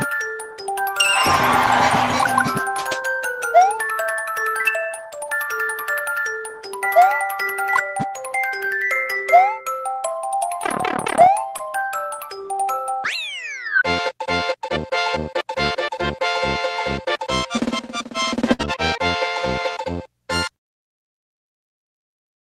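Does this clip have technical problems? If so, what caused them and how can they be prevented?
Yes. At 11.57 to 11.61 s there is a short concealed packet loss. About 20 ms of audio never arrived in time. The receiver stretched the preceding sound across the gap and blended back, leaving a brief smear where that slice should be.

At 18.53 to 18.61 s a burst of packet loss cuts out about 60 ms. The receiver extended the last sound and let it fade. Playback then picks up further along, with that stretch gone.

Both can be prevented with a steadier network path, a larger jitter buffer, or forward error correction on the stream.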